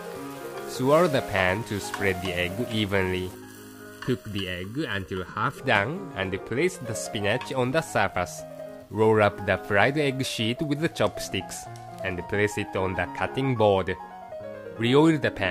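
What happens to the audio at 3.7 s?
Channel delay (comb filtering) from 3.35 to 5.59 s: one channel lags under a millisecond, so mono summing carves evenly spaced notches from around 700 Hz, showing as dark horizontal bands and a hollow tone.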